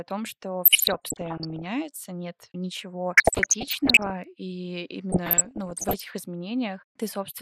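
Throughout the speech the top end sounds dull and gurgling, with a granular roughness, most likely from MP2 compression at a low rate; the damage is plainly audible and fits something around 80 kbps. MPEG Layer II divides the spectrum into 32 sub-bands and rations bits among them, so upper bands drop out and flicker while the remaining ones are coarsely quantised. On a spectrogram this shows as a ragged ceiling of missing high-frequency blocks that come and go frame by frame.

Right after "том что", from 0.65 to 1.66 s, DAB burbling sets in: bubbling, squelchy chirps over the speech. Bit errors, here at a rate around one or two percent, have slipped past error correction into the MP2 data, so corrupted samples put short noise blips in single sub-bands and corrupted scale factors make sub-bands leap in level for up to a frame. The spectrogram shows scattered bright rectangular patches, each one band wide and one frame long, across most frames in the span.

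At 2.43 s there is a bit error spike, a single sharp tick unrelated to the speech. A flipped bit in what sounds like two adjacent samples throws the value by a power of two before it snaps back. The waveform shows a narrow vertical spike, and the spectrogram shows a thin full-height line.

The burbling returns from 3.15 to 4.11 s with a slightly lower error rate of about one percent, leaving the same blocky sub-band flashes.

Another bit error spike at 4.24 s, which sounds like a single corrupted sample, gives one more isolated click with the same needle-like waveform spike.

The last stretch of DAB burbling, 5.12 to 6.08 s, is the mildest, with an error rate below one percent. Fewer band patches mean milder burbling.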